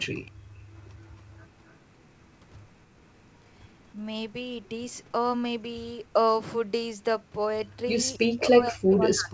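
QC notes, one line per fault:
0.07–0.36 s, 3.93–3.99 s and 8.32–9.3 s: speech suppressed in double talk. The level drops by about 35 dB, then only slightly, then by about 40 dB to the end. This is likely an echo canceller mistaking near-end sound for echo while both sides spoke, and turning everything down.
1.66–1.73 s: echo leak. A brief, faint copy of the speech returns 261 ms later, roughly 40 dB below the main signal. This is likely a loudspeaker's output reaching a microphone, with the echo canceller failing to remove the residue before sending it back.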